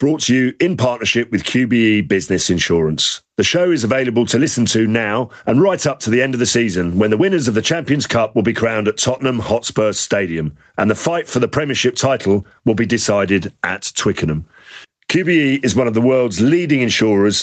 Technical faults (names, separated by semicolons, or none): gain pumping